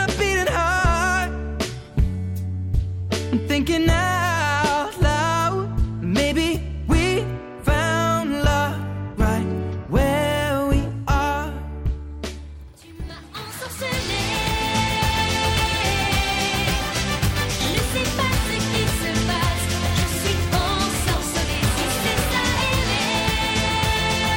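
From 19.22 to 20.39 s a train of clicks ticks over the sound, about seven pulses of much the same shape at a regular 5.15 per second and roughly as loud as the signal, likely from interference or a faulty connection; their steady spacing sets them apart from random crackle.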